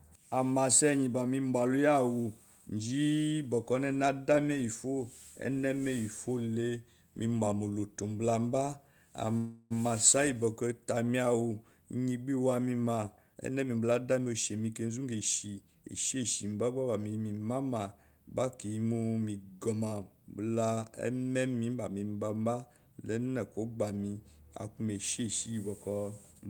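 At 9.37 s the speech stops and a fading buzz fills about 330 ms until 9.72 s, when it resumes where it left off. This is a call audio freeze, likely from delayed packets emptying the jitter buffer. Unlike a dropout, nothing is lost.

From 13.34 to 16.17 s a jitter buffer speed-up trims pitch periods to shed the backlog. Speech runs at about 111% and sounds hurried, roughly a third of a second shorter, yet keeps its pitch, unlike resampling.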